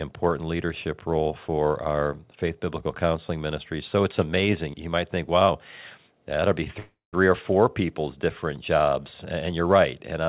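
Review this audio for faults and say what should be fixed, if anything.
At 6.79 to 7.15 s the speech stops and a fading buzz or hiss fills the gap, ending in about 160 ms of silence. That is a call audio freeze, likely caused by delayed packets draining the jitter buffer. On a waveform the last sound decays to a flat line. On a spectrogram, smeared energy below 4 kHz (the G.711 band limit) dies away. Nothing is lost, but speech resumes 335 ms late. A larger or adaptive jitter buffer and a steadier network route would prevent this.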